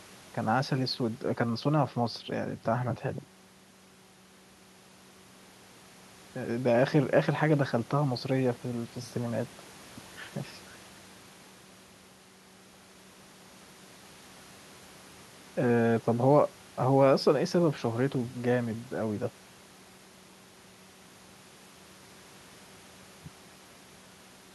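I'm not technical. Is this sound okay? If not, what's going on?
Yes, this recording sounds fine, and there's nothing here you need to worry about.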